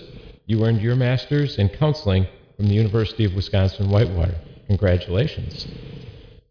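No technical faults can be heard anywhere in the clip. Nothing in the sound points to a problem in how it was captured, processed or delivered.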